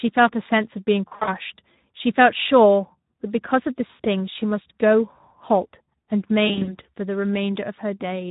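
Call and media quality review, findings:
Speex codec, whole clip: speech hoarse and noisy, top end just shaped hiss. Sounds like a middling Speex mode, around 11 kbps. Too few bits for the excitation, so the pitch pulses come out rough.

VoIP packet loss concealed by the speech codec, 1.07–1.29 s: about 140 ms dropped across 200 ms, longest gap 60 ms. Voice smears and fades.
Same at 3.87–4.06 s: about 120 ms over 160 ms, one 80 ms gap. Longest single gap.
Same at 6.47–6.77 s: about 120 ms over 200 ms, gaps up to 40 ms.
The decoder stretches its last pitch and filter with the gain ramping down, so the voice stays thin for a bit after packets resume.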